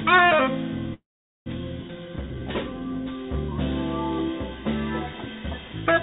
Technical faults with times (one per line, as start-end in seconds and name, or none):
0.94-1.48 call audio freeze
1.88-1.91 skip ahead
1.97-2.81 jitter buffer slow-down